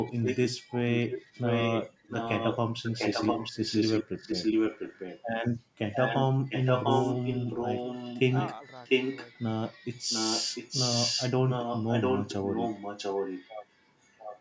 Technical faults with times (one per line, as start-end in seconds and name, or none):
0.00-5.29 echo leak
5.78-14.41 echo leak